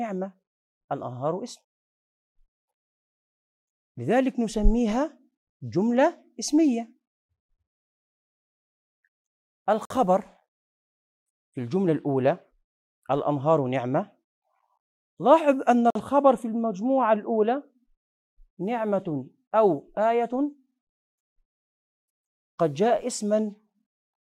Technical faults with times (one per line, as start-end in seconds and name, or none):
9.85-9.90 gap between chunks
15.90-15.95 gap between chunks